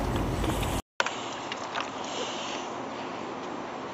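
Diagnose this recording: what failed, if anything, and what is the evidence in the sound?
At 0.8 s a 200 ms silence, then the rest is duller and about 5 dB quieter, nothing above 7.6 kHz, with a new low noise floor: likely an input switched to a poorer device, driver stage.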